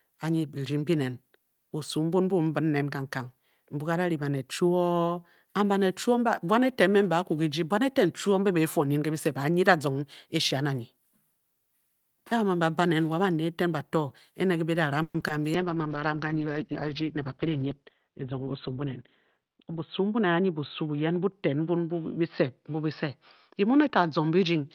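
Just after "bato ene ke bida", from 15.02 to 15.15 s, the audio stalls for about 120 ms: the last sound is stretched into a fading buzz or hiss with roughly 50 ms of near-silence, then resumes where it stopped. This is a call audio freeze, likely from delayed packets draining the jitter buffer. At 15.20 s and again at 15.28 s, short concealed packet loss leaves two brief smears, each about 10 ms of audio lost and bridged by extrapolating the preceding sound. From 15.55 s to the end, a call bitrate drop makes the sound rough and muffled as the top end falls from 20 kHz to about 4 kHz, which fits the encoder being throttled from around 48 kbps to 11 kbps. Between 17.12 and 18.85 s, a jitter buffer speed-up plays the speech about 7% faster at unchanged pitch, trimming roughly 150 ms of pitch periods so it sounds hurried.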